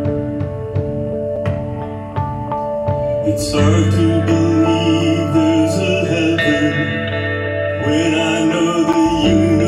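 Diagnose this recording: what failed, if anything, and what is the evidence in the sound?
The driver or buffer stage failed twice, leaving a block of digital silence each time. At 1.36 s the audio drops to silence for 5.8 ms. At 8.93 s it drops out again for about 8 ms. Each edge is abrupt, with no fade, so each gap is heard as a tick or dip. The first gap's length fits a 256-sample buffer. The program likely failed to fill the output buffer in time, so zeros were played in its place.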